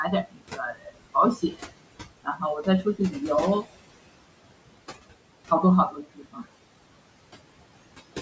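Noise suppressor artifacts run through the whole clip. The room noise, about 14 dB below the speech, is pushed down by about 21 dB between phrases. What remains shows on a spectrogram as speckled, flickering residue in the gaps.

Speech cut by the noise suppressor occurs at 0.23–0.98 s, 1.35–1.72 s, 2.23–2.42 s, 2.83–3.15 s and 5.91–6.43 s. Soft speech mistaken for noise drops by up to about 22 dB and sounds swallowed. The waveform dips abruptly there, and the spectrogram's energy thins out.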